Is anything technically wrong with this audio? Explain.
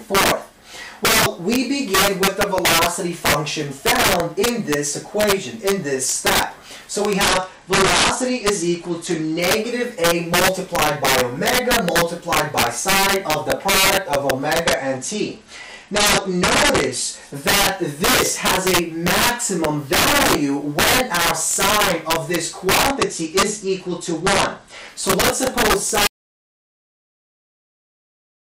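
Yes, there are three kinds of fault. Integer overflow runs throughout: the loudest peaks become violent, sharp cracks, harsher than clipping. The level is pushed about 8 dB too hot, so a small fraction of samples exceed the integer limit and wrap to the opposite extreme instead of being held.

A Bluetooth SBC bit pool drop occurs three times, from 7.23 to 9.40 s, 14.64 to 17.35 s and 22.87 to 24.88 s. Each time the treble dulls and gritty noise rises, then clears. This fits the link falling to a bit pool near 12, around 88 kbps, which starves the high sub-bands and coarsens the rest.

An audio dropout to silence starts at 26.07 s and lasts to the end. The sound cuts off into silence with no room tone. The likely cause is a lost input while the recorder kept writing silence.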